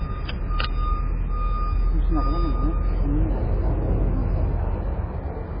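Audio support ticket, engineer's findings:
MP3 compression, throughout: nothing above 5 kHz, watery swirling from weak lines dropping in and out, likely encoder starved of bits, fitting roughly 16 kbps.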